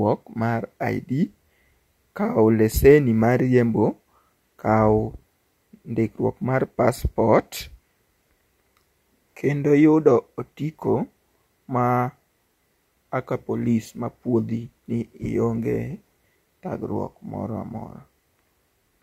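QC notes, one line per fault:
No faults were found in the speech clip. Nothing in the audio calls for a note.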